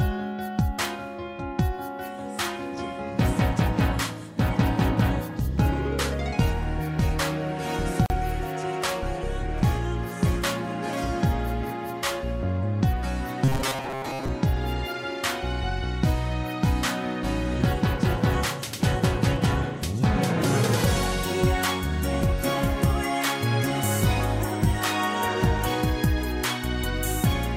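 At 8.06 s a 39 ms gap at a join of encoded pieces opens: encoder delay and end padding were left in, cutting the sound abruptly before it resumes. From 13.44 to 14.28 s the sound turns into a metallic 133 Hz buzz, robotic sound likely from repeated short buffers of about 7.5 ms replacing most of the real audio.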